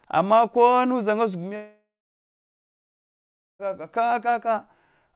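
A long network dropout runs from 1.56 to 3.61 s. The speech turns into a fading buzz, then about 1.7 s of near silence, and resumes with about 2 s missing. The likely cause is packets lost in transit while the receiver filled the gap.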